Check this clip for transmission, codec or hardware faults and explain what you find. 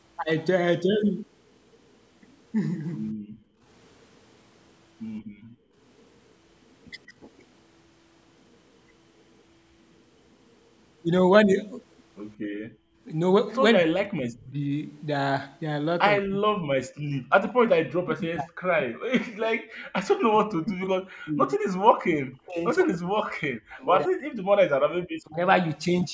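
Two echo-canceller faults are present; the call's microphone processing, which passes nothing above 8 kHz, is not one of them.

Background gated by the echo canceller, at 3.43–3.64 s, 5.21–5.76 s and 12.37–13.01 s: the canceller clamps the microphone while the loudspeaker plays, so room sound dips by up to about 26 dB.

Speech suppressed in double talk, at 13.74–14.59 s and 16.23–25.38 s: the voice itself drops by around 40 dB, likely because the canceller mistook overlapping talk for echo and attenuated it.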